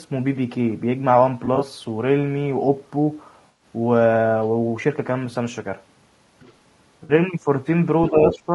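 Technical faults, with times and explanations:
Throughout, low-delay AAC compression: the sound is rough and grainy, with noise filling the gaps between harmonics and a dull, synthetic top end. That's likely AAC-ELD at a low rate, something around 32 kbps; its short frames can't resolve pitch harmonics cleanly.
1.45–1.63 s, 3.47–3.64 s and 7.03–7.13 s, AAC frame loss with concealment: brief smeared, phasey patches. The first scatters about 60 ms of loss in short bursts across 160 ms, the second loses 100 ms, and the third is 60 ms. The decoder patches each gap from the last good spectrum.
6.40–6.53 s and 8.29–8.38 s, other side's voice leaking through: scraps of a second talker creep in, about 30 dB under the main speech the first time and about 10 dB under it the second. The likely cause is loudspeaker echo the canceller didn't fully remove.
8.10–8.54 s, speech suppressed in double talk: the talker dips by up to about 10 dB, in pieces adding up to roughly 300 ms, right as that second voice intrudes. 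The likely cause is the echo canceller turning everything down when both sides talk at once.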